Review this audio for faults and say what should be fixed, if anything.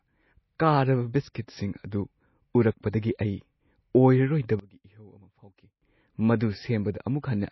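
The whole clip carries plainly audible codec damage. Nothing is present above 5.8 kHz. This points to a very low bitrate, around 24 kbps. The likely cause is MP3 compression. At such a rate the encoder runs short of bits. It drops weaker frequency lines frame by frame and cuts the treble at a fixed point. That loss is what you hear across the speech. To prevent it, encode at a higher bitrate or keep a lossless copy.

From 4.59 to 5.82 s the level drops by about 22 dB, then returns. The likely cause is one channel inverted before the mix to mono. With one side's polarity reversed, content shared by both channels cancels in the sum. Only the difference between the two channels remains. That leaves this stretch far quieter than the audio around it. To prevent it, check channel polarity before downmixing to mono.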